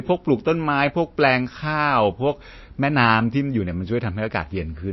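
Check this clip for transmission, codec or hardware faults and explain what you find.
One codec fault runs through the whole clip. The speech has nothing above 5.8 kHz and plainly audible watery, swirling artefacts. This is likely MP3 compression at a low bitrate, around 27 kbps. Starved of bits, the encoder cuts the treble at a fixed point and drops weak frequency lines that flicker between frames, smearing consonant attacks.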